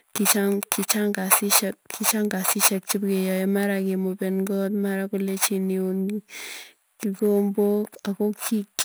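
Imaging from sample-and-hold upsampling runs through the whole speech clip. The rate seems raised from 24 kHz to 48 kHz by repeating samples without smoothing. A mirrored copy fills 12 to 24 kHz, about 9 dB down. It sounds like metallic fizz following the speech.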